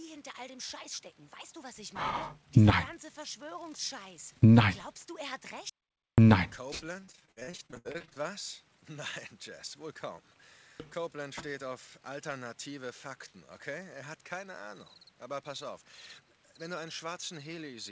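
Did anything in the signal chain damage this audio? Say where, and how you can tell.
Yes. From 5.70 to 6.18 s there's an audio dropout to silence: half a second of silence, no room tone, likely a lost input link.

Then, from 7.00 to 8.23 s, repeated packet loss on the network leg: about twenty short holes, the longest 64 ms, each patched by extending the previous sound. That concealment produces the choppy, robotic texture.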